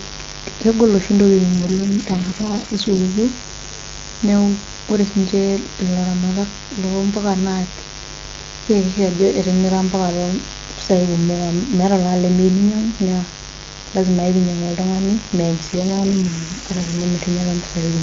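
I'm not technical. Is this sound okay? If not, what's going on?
No. Two problems can be heard.

A mains buzz runs through the entire recording. It is a steady, raspy hum tied to the 50 Hz mains power supply, and it is fairly loud next to the speech. It sounds like electrical interference leaking into the recording chain, for example from a light dimmer, a power adapter, or a cable without proper shielding. That kind of interference sends sharp spikes into the audio a hundred times a second, which gives the sound its gritty edge.

There are also two AMR rate drops. The first comes right after "kegol oshi" and lasts from 1.53 to 3.00 seconds. The second runs from 15.67 to 17.04 seconds. In both, the voice turns rough and robotic and then recovers. This is a phone-network effect. When the radio link weakens, the HD Voice codec switches to a much lower quality setting and uses the saved capacity to protect the call from errors. 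The sound keeps playing without a gap, but the voice loses detail until the link improves.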